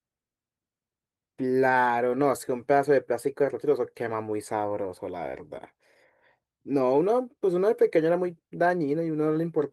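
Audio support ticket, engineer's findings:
Listened through the speech recording and nothing stood out; no findings to log against any component.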